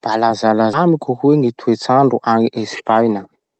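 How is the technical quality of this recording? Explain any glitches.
A skip ahead mars the recording at 0.73 s. About 0.4 s of speech is dropped, likely discarded by an overflowing jitter buffer, so playback jumps forward with no gap and joins both sides abruptly. The call codec's band limit near 8 kHz is also audible.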